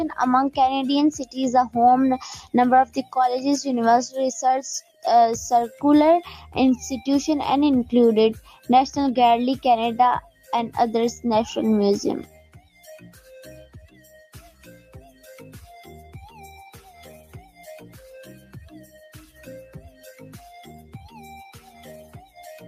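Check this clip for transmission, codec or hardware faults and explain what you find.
A speech-tuned noise suppressor is processing non-speech sound, and it audibly cuts parts of it.

Noise suppressor applied to music or sounds, throughout: the suppressor treats steady tones and decays as noise. Gain swings by roughly 10 dB. Attacks pass, but sustained parts sink, so the level pumps and thins.

Sound cut by the noise suppressor, at 2.43–3.14, 4.81–5.05, 8.50–8.69, 10.22–10.50, 12.24–15.27, 16.78–17.62, 18.39–19.39 and 21.58 s to the end: held or fading sound drops by about 7 to 14 dB. Tails are clipped short. The longest stretch runs from 12.24 s to 15.27 s.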